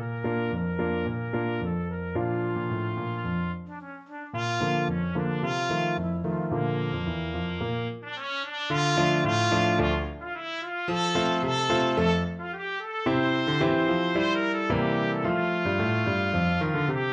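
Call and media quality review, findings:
No audible faults found.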